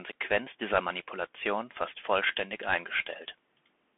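From start to finish the speech carries the sound of a Bluetooth CVSD headset codec. The band is squeezed to roughly 200 Hz to 3.4 kHz and nothing survives above 3.8 kHz, which fits a 64 kbps CVSD link. CVSD sends one bit per sample to step the waveform up or down with an adapting step size. Loud high-frequency content outruns that step, so s sounds come through scratchy and distorted, and a granular hiss sits plainly under the speech.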